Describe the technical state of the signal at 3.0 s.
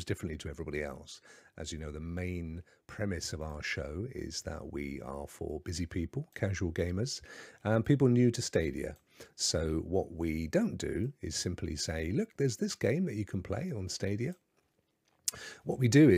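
At 3.0 s the speech signal is intact, with no technical fault present at that moment.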